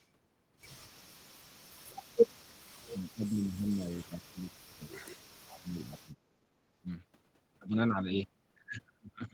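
Speech that sinks twice: from 2.91 to 4.5 s the level drops by something like 20 dB, then from 5.61 to 6.31 s by about 25 dB. It sounds like speech suppressed in double talk, likely an echo canceller ducking this talker while the far end spoke.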